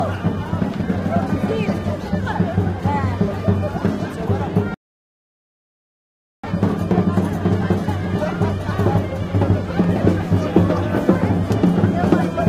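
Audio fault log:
4.74–6.44 s, rebuffering stall: the sound drops abruptly to silence at 4.74 s and stays silent for about 1.69 s, then picks up at 6.44 s exactly where it left off, with nothing skipped or repeated. The playback buffer ran dry, so the player halted output until enough new data had arrived to continue. Because the stream pauses rather than jumps ahead, no material is lost, but the clip runs about 1.7 s longer than its content.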